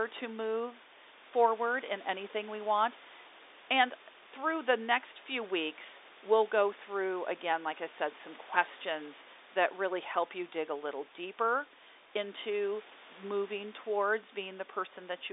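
Nothing technically wrong turns up in this speech clip; it simply has the narrow band of an ordinary telephone line and some quiet room noise well beneath the talking.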